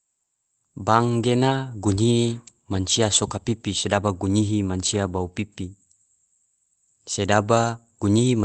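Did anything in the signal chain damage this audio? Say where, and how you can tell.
No, nothing in the signal chain stood out as damaging this speech on listening.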